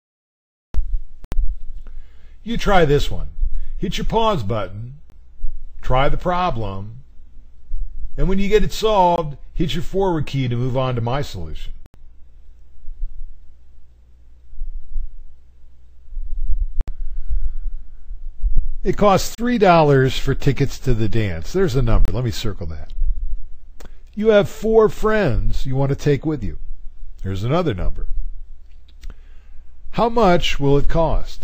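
Blocks of digital silence appear at 1.25, 5.10, 9.16, 11.86, 19.35 and 22.05 s, each 20 to 80 ms long, where the output buffer likely went unfilled and samples fell to zero. The sound drops out abruptly. The waveform shows flat near-silent stretches, and the spectrogram shows blank gaps.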